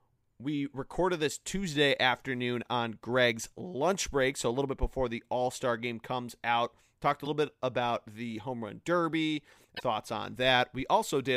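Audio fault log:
7.23–7.27 s and 9.76–9.81 s, damaged data in a compressed stream: corrupted bytes in the encoded speech leave the decoder unable to read those frames, so it loses sync and hunts for the next valid frame header before recovering. Each event is heard as a short chirp, squawk, click or hole, roughly 40 to 50 ms long, cutting across the speech, the first just before "bit about the", and the second shortly after.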